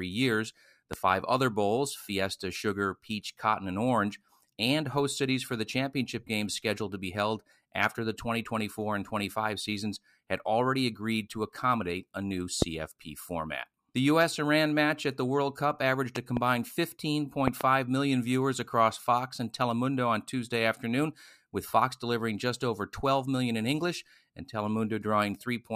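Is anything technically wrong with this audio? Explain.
Yes, the speech carries six loud pops, sharp thumps sitting well above the level of the talking, which continues underneath. Single pops come at 0.93–0.96 s, just before "five other bowls", and at 12.62–12.64 s, just after "to accommodate a new". Double pops come at 16.16–16.39 s and at 17.48–17.63 s, the latter just before "million viewers across". They peak roughly 15 to 20 dB above the speech. The likely cause is a sudden voltage pulse, as from a plug, switch, static discharge or driver glitch.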